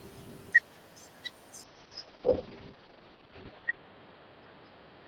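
At 1.65 s a call bitrate drop sets in. The encoder falls from 32 to 7 kbps and the band narrows from 20 to 6 kHz. The speech turns muffled and rough through the end.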